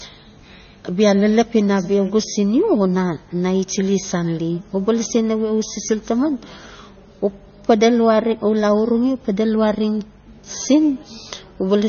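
Across the whole clip the speech carries heavy coding damage, with nothing above 6.6 kHz, so sibilants lose their top and the sound is dull. This is likely MP3 compression at a low bitrate, which fits roughly 25 kbps. With so few bits, the encoder cuts the treble at a fixed frequency and drops weak spectral lines that flicker between frames, giving a watery, swirly texture and smeared consonant attacks.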